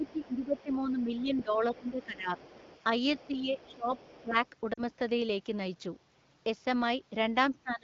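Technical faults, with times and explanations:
0.00 to 2.31 s, 3.14 to 4.36 s and 7.51 to 7.84 s, speech suppressed in double talk: the talker's level dips by about 15 dB in the first two stretches (over roughly a second and a half, then under a second) and about 25 dB at the end. The likely cause is an echo canceller that could not tell the talker from loudspeaker echo and turned everything down.
0.06 to 4.22 s, other side's voice leaking through: a second voice sits faintly underneath, about 25 dB below the talker. It is probably the far end playing on the talker's loudspeaker and reaching the microphone, with the echo canceller leaving a residue rather than removing it fully.
4.73 to 4.80 s, lost AMR speech frames: a 40 ms hole, which fits two consecutive 20 ms frames failing after radio errors. The AMR wideband decoder bridges it by repeating the last good pitch and vocal tract settings at falling gain, so the sound smears briefly and sags, and the voice comes back weak or rough for a moment.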